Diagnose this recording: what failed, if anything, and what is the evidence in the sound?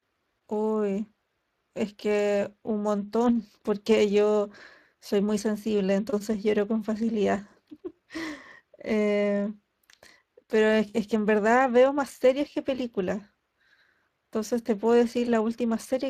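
The failure is at the codec stage: a Speex codec is damaging the speech across the whole clip. The damage is plainly audible and it never lets up. The speech sounds noisy and hoarse. Speex is a CELP coder. It rebuilds speech from a vocal-tract filter and a coded excitation. Here the excitation gets too few bits, so its errors come through as roughness. That texture fits a Speex setting of around 22 kbps.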